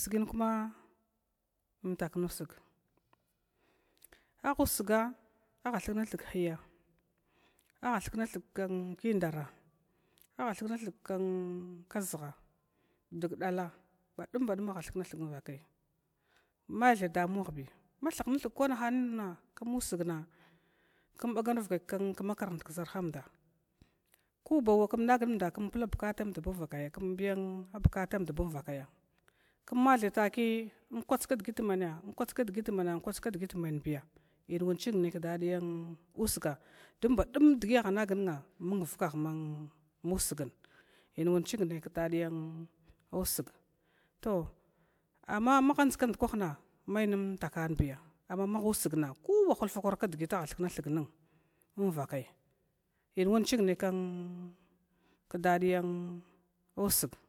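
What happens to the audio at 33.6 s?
Nothing goes wrong at 33.6 s: the speech continues intact through that moment, with no dropout, click, distortion or other fault.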